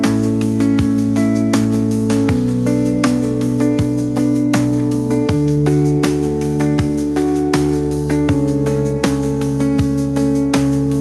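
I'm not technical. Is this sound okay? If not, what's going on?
Yes, nothing here sounds wrong. The audio has gone through an ordinary WebRTC call path using the Opus codec, which keeps the sound up to about 12 kHz and trims only the very highest, airiest frequencies above that.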